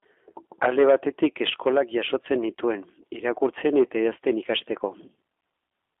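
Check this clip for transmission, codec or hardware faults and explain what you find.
One codec fault runs through the whole clip: G.729 codec coding, with audio limited to a 250 Hz to 3.5 kHz telephone band. Throughout, the speech sounds plainly rough and synthetic, which fits an 8 kbit/s G.729 coder. Each 10 ms frame is rebuilt from a vocal tract filter, a pitch predictor and a few fixed pulses rather than the original waveform, so fine detail and everything above 3.5 kHz are gone.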